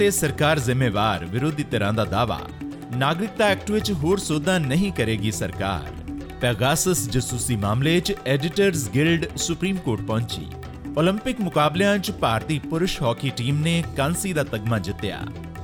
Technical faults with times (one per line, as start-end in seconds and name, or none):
none